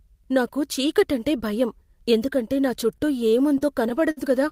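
From 2.87 to 4.19 s, right after "చీకటంటే భయం ఎందుకంటే నా", the speech breaks into repeated stalls (stutter). Packets arrived late, the jitter buffer kept running dry, and the receiver stretched the last sound through eleven short gaps of up to 58 ms, about 175 ms in total. Nothing is lost, but the delivery drags and hiccups. On a spectrogram, brief smeared, frozen-looking patches interrupt the formant tracks. The waveform shows small repeated or fading stretches.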